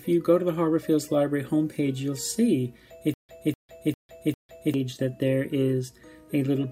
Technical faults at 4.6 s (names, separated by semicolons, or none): stutter with silent gaps